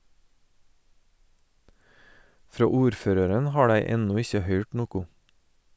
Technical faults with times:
none

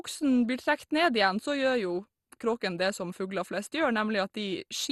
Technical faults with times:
0.00-4.92 MP2 compression

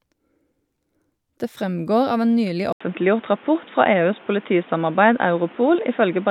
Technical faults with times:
2.73-6.30 input switched to a poorer device

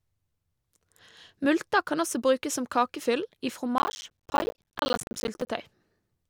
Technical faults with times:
3.78-5.47 processor overload crackle

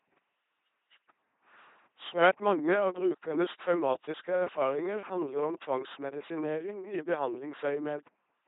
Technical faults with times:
0.00-8.47 LPC-10 vocoder

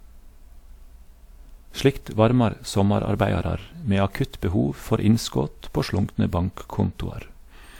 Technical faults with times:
0.00-7.80 generation loss

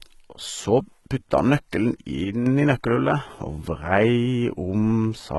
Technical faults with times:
0.00-5.38 HE-AAC compression
2.24-2.46 one channel drops out

